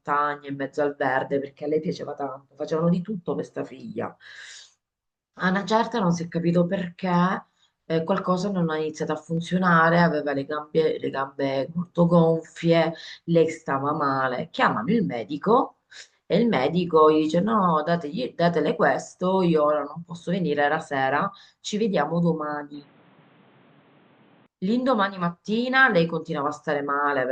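From 22.74 to 24.46 s the speech suddenly turns boxy, with nothing above 4.2 kHz and faint new background noise. That's likely the input switched to a poorer device.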